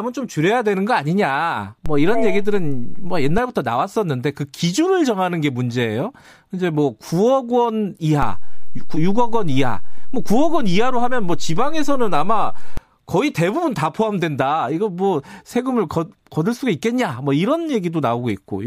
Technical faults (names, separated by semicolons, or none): DC step